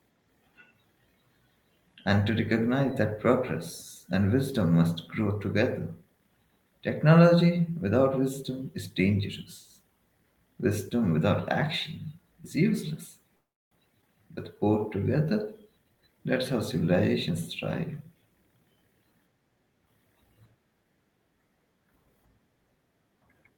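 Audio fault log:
13.35–13.73 s, call audio freeze: the sound stops and a gap of about 0.36 s is spliced in, most of it (0.32 s) plain silence after a brief continuation of the last sound fading out. When the audio resumes it picks up exactly where it broke off, with nothing lost, so everything afterwards arrives 359 ms later than before. This is likely packets held up in transit, letting the jitter buffer run dry until they arrived.
14.01–14.04 s, skip ahead: shortly after the freeze, playback jumps forward. About 70 ms of the sound is dropped and the two sides are joined through a tiny fill of roughly 8 ms, so the jump is almost seamless but a fragment of the sound is simply absent. Later audio was already queued, so the receiver discarded a stretch, which also wins back about 70 ms of the delay the freeze added.
14.25–15.26 s, jitter buffer slow-down: for about a second the sound plays at 93% speed while keeping its pitch. 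The receiver repeated single pitch periods or slivers of pause many times over, adding 78 ms in total to rebuild a reserve in a buffer that was running low. The result is slightly stretched, drawn-out sound, with the pitch unchanged because whole cycles were duplicated rather than resampled.
15.83–17.42 s and 17.92–18.45 s, jitter buffer speed-up: two stretches run fast at unchanged pitch. The first plays at 119%, hurried and clipped, with roughly 0.3 s cut out. The second is milder at 108%, removing roughly 50 ms. Here the buffer held more audio than its target, so the receiver trimmed short pieces of one or a few pitch periods over and over to bring the delay back down.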